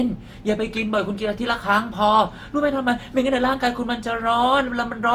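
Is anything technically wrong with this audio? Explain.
Yes. The speech has generation loss from start to finish. It sounds swirly and smeared, with a hollow, thinned quality, and consonant attacks are blurred. The likely cause is several passes through a lossy codec, around three. Each pass requantises the audio on a shifted frame grid, so noise builds up. The smearing fits repeated Opus coding at about 48 kbit/s. The top end still reaches about 20.2 kHz.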